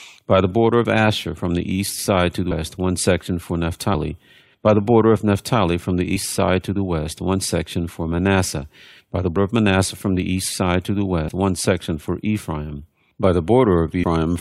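Five brief smeared blips, each with a small jump forward in the sound: at 2.50 s, between "the east side to" and "one section for"; at 6.15 s, just before "side to the west"; at 9.35 s, right after "by the"; at 11.27 to 11.29 s; and at 14.02 to 14.04 s. These are compressed frames skipped. Whole frames of roughly 21 ms were not played, dropping around 150 ms at the first, third and last jumps, about 100 ms at 11.27 s and about 70 ms at 6.15 s. Overlapping neighbouring frames blur each join, so it sounds like a blip rather than a hard click.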